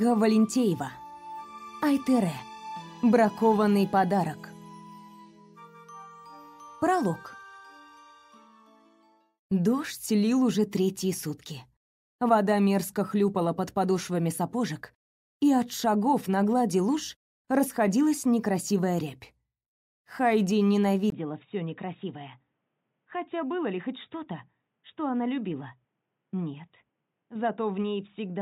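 At 21.1 s the recording system likely switched its input to a poorer device, and the audio stays on that input through to the end. A gap of about 20 ms marks the switch. After it, nothing comes through above 3.8 kHz, so the sound turns dull and boxy. The level drops by roughly 5 dB, and a new, faint background noise appears, sitting around 50 dB below the signal.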